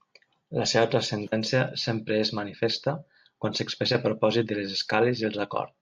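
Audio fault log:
No faults are audible anywhere in the speech.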